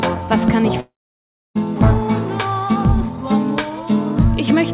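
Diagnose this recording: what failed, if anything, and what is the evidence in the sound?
The network stage likely failed: a long dropout in the stream starved the receiver's jitter buffer of packets from 0.8 s to 1.57 s. The long network dropout sounds like this: the receiver stretches the last sound into a brief fading buzz or hiss, then about 0.66 s of silence follows. The audio resumes at 1.57 s, but roughly 0.76 s of the original is simply gone. The narrowband G.711 path, with nothing above 4 kHz, carries on unchanged on either side of the gap.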